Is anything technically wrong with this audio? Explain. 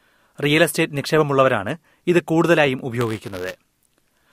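Yes. From 3.00 s to the end at 4.33 s, the speech has buffer tearing. The writer and reader of the ring buffer have slipped and cross each period. A small sliver, roughly a fiftieth, holds audio about 10 ms old. The hard joins make a robotic buzz near 172 Hz, which fits a 256-sample buffer.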